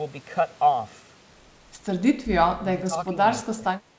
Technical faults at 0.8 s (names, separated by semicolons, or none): none